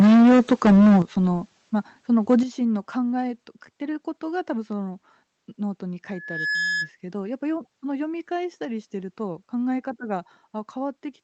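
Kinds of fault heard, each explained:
Microphone overload: From the start to 0.99 s the speech has a harsh, crackling, flattened edge, and a shorter burst at 2.3 to 2.35 s sounds the same but milder. The likely cause is a microphone input set too high, so that peaks overran the converter's limit by about 8 dB in the first stretch, cutting the tops off a large share of the waveform there, and by about 3 dB in the second, where less of it was clipped.
Microphone volume stepped down: Right after each distorted stretch, the speech and the background drop abruptly in level together, by about 9 dB at 1.02 s and by about 7 dB at 2.43 s. The likely cause is the call software detecting the overload and cutting the device's input volume in one step. That is why each drop follows a distorted peak rather than fading in gradually.
Loudspeaker feedback squeal: From 6.1 s a single tone at 1.7 kHz swells out of the speech over a few tenths of a second and sits about 5 dB above it until 6.91 s. 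A microphone is picking up the loudspeaker it feeds, and at 1.7 kHz the loop's gain exceeds one, so that frequency keeps growing on its own. It is heard through the call's Opus coding, which limits the top of the band to about 8 kHz.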